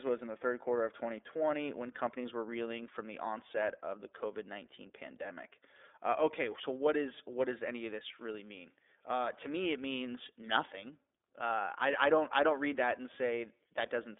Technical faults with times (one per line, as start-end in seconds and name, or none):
0.00-14.19 iLBC codec